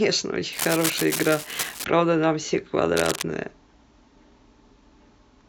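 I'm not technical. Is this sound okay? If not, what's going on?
No. There's cable scratch noise, a rough scratchy rustling laid over the speech from 0.53 to 1.84 s and again from 2.96 to 3.22 s, nearly as loud as the talking. It's likely a worn cable or connector being jiggled, briefly making a crackly contact.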